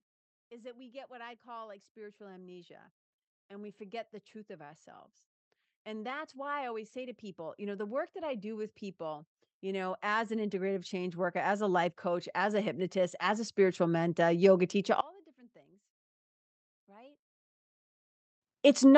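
From 0.48 to 2.87 s the speech and background swell together by about 6 dB, and again from 5.84 to 14.45 s, just after "the truth of ourselves", by about 18 dB. This is automatic gain rising: the gain control judged the input too quiet and slowly pushed its gain up.

From 15.01 to 18.42 s the speech nearly disappears, dropping by about 30 dB and leaving only a faint trace. The likely cause is one channel inverted, so the shared centre content cancels when the stereo channels are summed to mono.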